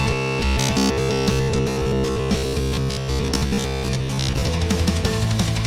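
From 0.02 s to 4.48 s, the sound turns to a rigid, metallic buzz with robotic sound from repeated short buffers. A fixed buzz at 66.7 Hz runs through this span. That rate fits a slice about 15 ms long being played again and again. The likely cause is new audio arriving too seldom. The playback fills each gap by repeating the last short buffer. Most of the time is filled this way, and the real audio in between is skipped.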